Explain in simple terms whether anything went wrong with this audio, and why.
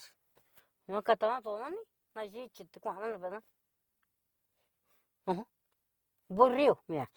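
From start to finish the speech sounds grainy, rough and noisy, most likely from Opus compression squeezing the sound too tightly.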